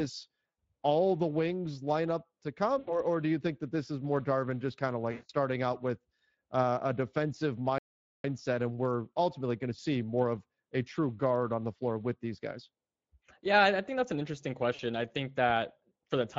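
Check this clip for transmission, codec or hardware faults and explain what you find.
Three kinds of fault are present in this speech: plainly audible Speex coding damage throughout, four packet-loss concealment events, and one playback stall.

Speex codec, throughout: the speech carries plainly audible CELP coding damage, a hoarse, noisy roughness. The encoder has too few bits to model the excitation accurately, and the sound points to a Speex mode of roughly 20 kbps. Any band above 8 kHz is only shaped noise fill, not real detail.

VoIP packet loss concealed by the speech codec, at 0.59 s, 2.79 to 3.00 s, 5.11 to 5.31 s and 14.75 to 14.81 s: at each point the decoder received no packets and extended its last pitch and filter while lowering the gain. This turns the speech into a buzzy or coloured, fading smear. The gaps are about 80 ms at the first two, about 180 ms between "just kind of" and "out with uh a", and about 40 ms between "think that's an interesting" and "I think that". 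Because each frame builds on the previous one, the voice stays weak or distorted briefly after packets resume.

Playback stall, 7.78 to 8.24 s: the output drops to silence for about 460 ms between "with uh a defensive" and "and we're ultimately going", then resumes. This is likely caused by the player running out of buffered data or its thread being blocked.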